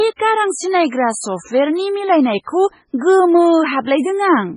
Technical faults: MP3 compression

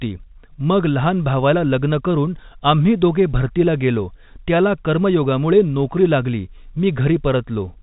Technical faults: none

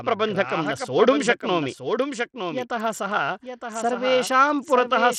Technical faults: doubled audio track; Bluetooth SBC compression

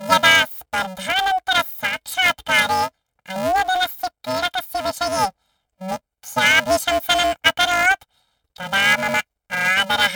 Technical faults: planar audio read as interleaved

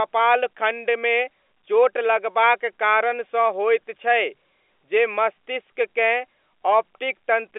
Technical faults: none

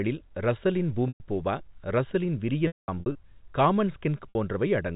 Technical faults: packet loss with pitch repetition

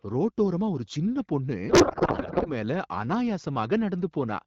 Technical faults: codec payload misread

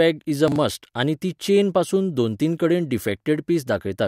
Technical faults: chunks out of order

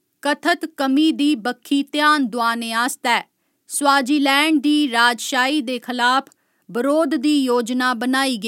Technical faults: none

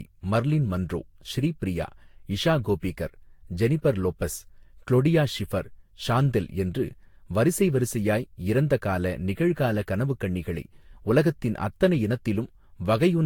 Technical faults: generation loss; dropped samples

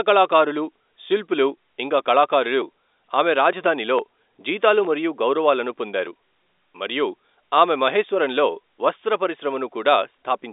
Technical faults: none

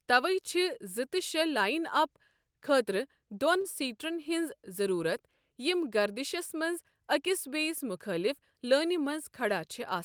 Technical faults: short stall from a late packet

